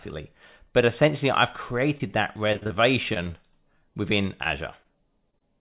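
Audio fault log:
1.98–3.83 s, repeated packet loss (robotic sound): around a dozen short holes in quick succession, the longest about 48 ms. Each gap gets papered over by stretching the last bit of sound, so you hear a choppy, robotic texture with small pieces missing. Concealment covers roughly 13% of the stretch. It all sits on a telephone-band G.711 sound with nothing above 4 kHz.
4.43–5.42 s, repeated packet loss (robotic sound): a second, lighter burst of about five holes, none longer than roughly 25 ms. The same fill-in trick smears over each one, giving that same brief stutter, though it's less dense at about 8% concealed.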